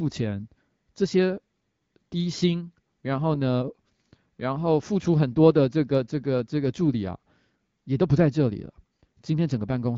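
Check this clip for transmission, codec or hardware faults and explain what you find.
No faults found.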